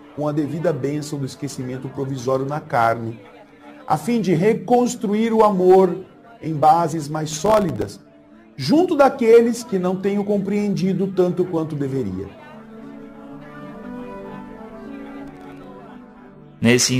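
The processor fell behind its audio deadlines twice, producing processor overload crackle from 7.31 to 7.89 s and again from 15.28 to 15.68 s. With buffers this short, around a millisecond and a half, each missed deadline drops a sliver of silence with hard edges into the audio. The first stretch sounds like dozens of misses in quick succession, a gritty tearing over the sound. The second is shorter and sparser, perhaps ten or so. Both stop abruptly once the load clears.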